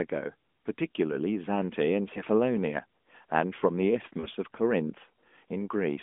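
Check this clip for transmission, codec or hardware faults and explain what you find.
Two short dropouts come from lost AMR speech frames on a narrowband mobile line carrying 200 Hz to 3.5 kHz. At 2.14–2.22 s a brief dip fits one lost 20 ms frame. At 4.20–4.26 s a smear fits two. Radio errors failed the checksums. The decoder then repeated old settings with falling gain before recovering.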